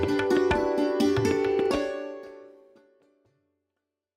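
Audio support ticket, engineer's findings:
Single sharp clicks at 0.36 s and 1.66 s, each a thin vertical line across the spectrum. Likely dropped samples: a tiny fraction of a millisecond skipped, so the waveform jumps. No audible gap, unlike a dropout. Second click sits within the gentle fade-out beginning around 1.5 s.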